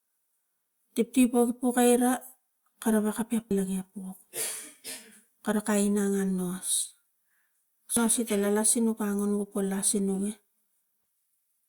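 At 3.51 s, the speech breaks with a brief glitch. This is damaged data in a compressed stream. Bytes in the encoded file are wrong at that point. The decoder cannot read the affected frame properly. It loses sync and hunts for the next valid frame header. The same fault returns at 7.97 s. Each event is a single short glitch, cutting across the speech for a moment before normal decoding resumes.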